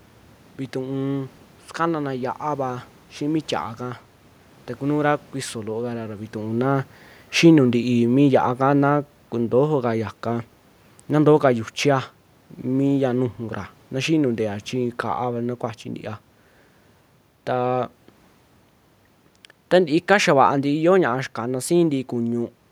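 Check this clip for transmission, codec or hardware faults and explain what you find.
One fault, heard twice: automatic gain falling. From 6.53 to 10.02 s and again from 19.73 to 22.43 s, the AGC decided the input was too loud or its background noise too strong and slowly pulled its gain down, by about 4 dB and then about 3 dB. The speech and the room noise behind it sink together. The level change around 6 s is just the talker moving relative to the mic, not the system.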